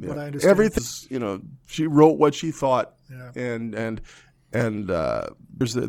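At 0.77–0.79 s, between "I understand" and "you know she wrote", compressed frames are skipped: about half a second of speech vanishes, with a jump fitting a 23.2 ms frame length. At 5.60 s about a tenth of a second goes the same way. Unlike a dropout, no silence appears.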